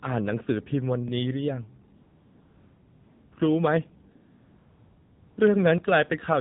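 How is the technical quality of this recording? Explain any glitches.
The technical quality is poor: the whole clip carries mobile-phone codec damage, and two pauses are filled with artificial noise.

Throughout, the speech sounds muffled, buzzy and synthetic, with nothing above 4 kHz. This is the AMR narrowband mobile codec: 8 kHz sampling cuts off the top, and a pulse-driven vocal-tract model rebuilds the voice. The plainly audible coarseness fits AMR-NB at its 7.4 kbps mode.

From 1.96 to 3.32 s and from 4.16 to 5.38 s, the background turns into a smooth, steady hiss that switches in and out. This is AMR comfort noise: the sender judged the talker silent and stopped sending speech frames for 1.36 s and 1.22 s. The receiver then filled those gaps with synthetic noise built from a rough description of the background.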